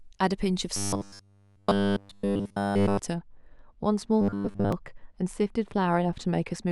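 From 0.76 to 2.99 s, audio likely arrived too late for playback, so the last 10 ms kept being replayed in place of the missing sound across the whole stretch. That is robotic sound from repeated short buffers: speech hardens into a rigid, metallic 100 Hz buzz. From 3.14 s to the end, de-emphasis was applied wrongly, cutting treble the signal did not need cut. Highs fall about 13 dB at 10 kHz, muffling everything. Between 4.21 and 4.72 s, buffers again likely ran short, and the same 100 Hz buzz returns, covering most of that stretch.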